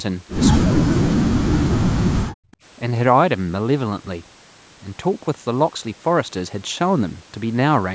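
From 0.57 to 1.59 s, and again from 1.85 to 2.19 s, the speech drops steeply, by around 40 dB at its deepest. Parts of it vanish. This is speech suppressed in double talk. The echo canceller likely mistook the talker for loudspeaker echo while both sides spoke.

From 2.47 to 2.51 s, the room sound dips by about 25 dB for roughly 40 ms. This is background gated by the echo canceller. It clamped the microphone during loudspeaker playback and then let go.

From 2.51 to 2.57 s, a faint, delayed copy of the speech appears about 180 ms behind it. It sits very low, around 35 dB under the speech. This is an echo leak, likely loudspeaker pickup that the echo canceller failed to remove. The call's microphone processing passes nothing above 8 kHz.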